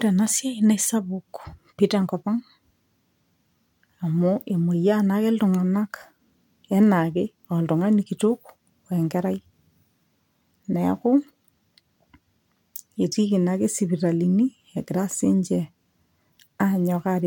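No technical faults can be heard anywhere in this recording.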